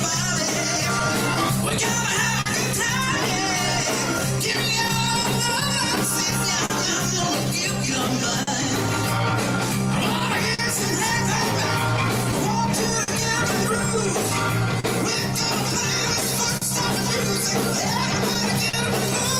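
Clock drift between sender and receiver runs through the whole clip. The sender's clock is a few percent slow, so small timing hiccups recur unevenly. Scattered short gaps appear from 0.99 to 18.75 s. Around thirty brief losses were patched by extending the last sound, each under about 50 ms, leaving ticks and smears.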